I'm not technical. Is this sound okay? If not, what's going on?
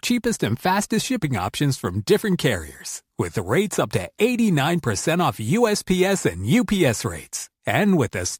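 No. The speech went through a crude rate conversion: its sample rate was stepped up by simply repeating existing samples, which fits a change from 32 kHz to 48 kHz. Throughout the clip this leaves a gritty, buzzy fizz clinging to louder and brighter speech sounds.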